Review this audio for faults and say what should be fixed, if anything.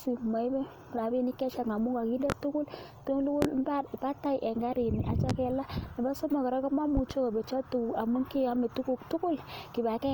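Loud pops occur at 2.30–2.34 s, just after "rabinik chechang amun koginde", then at 3.42–3.46 s and 5.30–5.33 s. A double pop comes at 6.97–7.15 s, between "somok kora" and "kobetyo tuguk amun keyome". The single pops peak about 20 dB above the speech and the double about 10 dB. Each is a sharp transient over speech that continues underneath, likely a voltage step from a plug, switch or static discharge.

To prevent this, secure cables and connectors, avoid switching or handling equipment while recording, and ground the setup properly.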